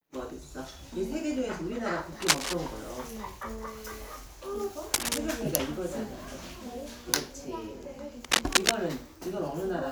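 A worn cable, connector or control being moved is the likely cause of cable scratch noise, where the contact resistance jumps around and injects dense, irregular bursts into the signal. It happens three times: from 2.22 to 2.54 s and from 4.94 to 5.18 s, each roughly 5 dB above the sound, then from 8.24 to 8.76 s, louder at about 10 dB above it. Each burst is a brief rough scratching or rustling laid over the audio.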